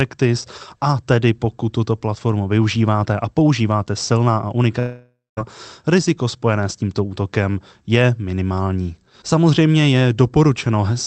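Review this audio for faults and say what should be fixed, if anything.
From 4.79 to 5.39 s the speech smears into a fading buzz, then silence, before resuming. This is likely a long network dropout that lost 0.58 s of audio. To prevent it, stabilise the network link and enable forward error correction or redundant packets so a gap this long can be recovered.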